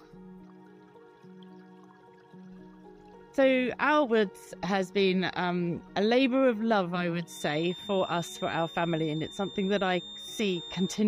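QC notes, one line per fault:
7.23–11.08 s, feedback whistle: a thin, steady tone at 3.6 kHz sits around 15 dB under the sound and swells and fades slowly in level until the end. Likely a loudspeaker-to-microphone loop held just at the edge of feedback, sustaining one frequency without running away.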